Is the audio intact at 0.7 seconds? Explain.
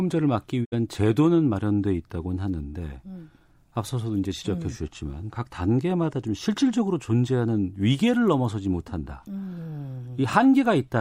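No. A digital broadcast dropout runs from 0.64 to 0.74 s, right across that moment. The receiver stopped getting usable data, either through loss of the signal or frames failing their checksum, and muted its output until valid frames arrived again. About 64 ms of sound is gone, which fits two lost frames. The speech fades to silence over roughly 20 ms, leaves a short hole, then resumes with the missing portion absent rather than delayed.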